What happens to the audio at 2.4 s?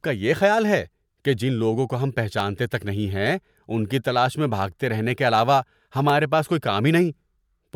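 At 2.40 s, between "کو ہم" and "تک نہیں", a single sharp click cuts through the speech. It is likely dropped samples: a fraction of a millisecond missing makes the waveform jump. Unlike a dropout, no audible gap or missing sound follows.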